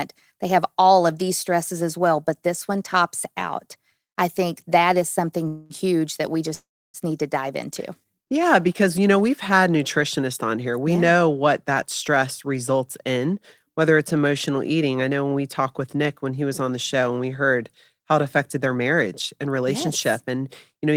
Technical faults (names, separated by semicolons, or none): call audio freeze; jitter buffer speed-up